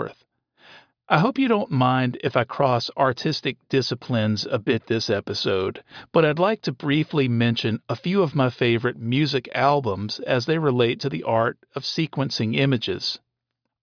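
No technical faults are audible.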